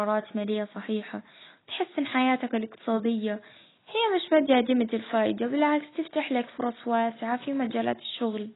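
Speech damaged throughout by heavy AAC compression, likely AAC-LC at a very low bitrate around 16 kbps. The encoder has discarded everything above about 3.9 kHz and starved the remaining bands, so the voice sounds dull and smeared, with a warbling, fizzy texture on sibilants and sustained sounds.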